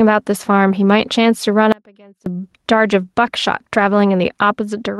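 Gain pumping runs through the whole speech clip. The gain swings by roughly 5 dB. The likely cause is gain set far too high, with a fast limiter clamping it on every peak. Dynamics sound squashed.

From 1.72 to 2.26 s there is an audio dropout to a faint residue. The speech cuts off abruptly for about 540 ms. Only a faint trace remains, roughly 30 dB below normal level. The signal was likely lost while the downstream path stayed live.

At 3.25 to 3.27 s comes a lost packet rebuilt from error correction. It is a 20 ms stretch, pointing to a single lost packet. The decoder played a low-bitrate copy carried in the next packet. So nothing goes silent, but that moment sounds briefly rougher and noisier.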